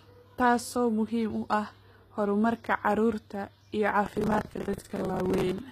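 From the start the speech carries HE-AAC compression artefacts, likely from a low-bitrate encode near 20 kbps: the treble is rebuilt from copied lower bands, so s sounds come out gritty and lispy, and nothing is present above about 14.9 kHz.

From 4.06 s to 5.58 s a processor overload crackle runs over the sound. Many buffers, each roughly 10 ms, miss their deadline and are filled with stale audio, so hard-edged fragments pile up into a gritty tearing that stops at 5.58 s.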